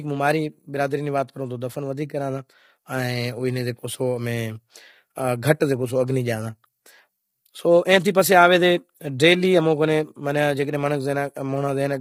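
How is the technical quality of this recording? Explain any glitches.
The technical quality is poor, with heavy coding damage across the whole speech clip rather than isolated glitches. The voice sounds rough and grainy throughout, with a hiss-like fuzz woven between the pitch harmonics and a thin, synthetic-sounding top band. That points to low-delay AAC compression, likely AAC-ELD as used in video calls, at a bitrate that sounds close to 24 kbps. Its very short frames cannot separate closely spaced harmonics cleanly, so the starved encoder smears energy into the gaps and rebuilds the highs crudely. On a spectrogram the harmonic stripes look blurred, with noise filling the spaces between them and a patchy, artificial upper region. The waveform itself shows little.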